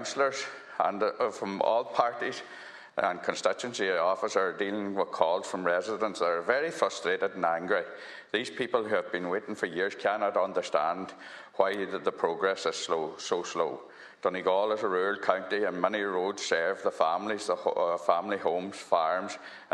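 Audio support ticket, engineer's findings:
Nothing stood out on listening; no symptoms to log against any component.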